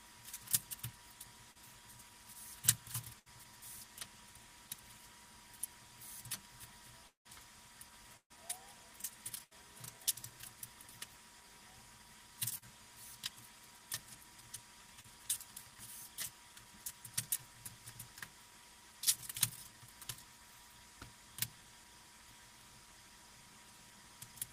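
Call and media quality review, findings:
Short concealed packet loss at 1.51–1.57 s, 12.58–12.65 s and 15.01–15.06 s. Brief smear or wobble, about 40 ms of sound missing each time. Receiver jitter buffer/decoder concealment extrapolated the last sound, then cross-faded back. Second instance slightly lengthened, by about 10 ms.

Burst of packet loss at 3.19–3.30 s, 8.17–8.32 s and 9.44–9.54 s. Held buzz or hiss fading out, then audio resumes further on. Missing audio of 60, 140 and 80 ms. Concealment decays; at 8.17 s it reaches silence for 90 ms. Timeline shifts 3 ms shorter at 3.19 s and 9 ms longer at 9.44 s.

Long network dropout at 7.07–7.27 s. Extrapolated sound fades quickly into about 130 ms of silence before audio returns, with about 180 ms of content absent. Likely cause: network path interruption exhausting the concealment and leaving the decoder with nothing to play.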